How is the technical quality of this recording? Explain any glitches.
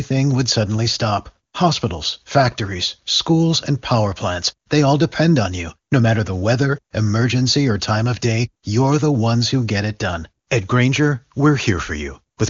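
No glitches to report; the speech carries the 7 kHz band limit of wideband HD Voice coding, and its clarity fits the top AMR-WB mode at 23.85 kbit/s.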